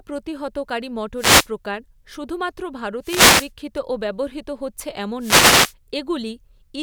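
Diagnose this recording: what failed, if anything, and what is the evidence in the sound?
Wireless microphone noise hits occur from 1.17 to 1.48 s, from 3.01 to 3.51 s just after "প্রকার শুধুমাত্র", and from 5.19 to 5.74 s just after "হচ্ছে এমন". Each is a brief swish of static over the speech, lasting from a third of a second to just over half a second. The failure is in the analogue FM radio link: reflected signals cancel at the receiver, the carrier fades, and receiver noise rises into the audio until the signal recovers.

CD scratch ticks fall between 3.78 and 4.30 s, ending just before "হচ্ছে এমন". There are four ticks, none longer than about a millisecond, spaced at a steady rhythm across that half-second. This is a storage and playback fault. A damaged spot on the disc passes the pickup once per revolution and corrupts more data than error correction can rebuild, so the player interpolates or mutes those samples on each pass.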